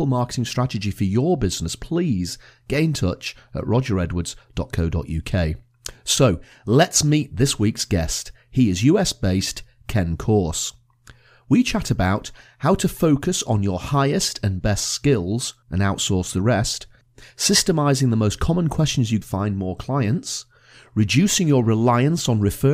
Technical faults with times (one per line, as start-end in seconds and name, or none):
19.20 stream segment skipped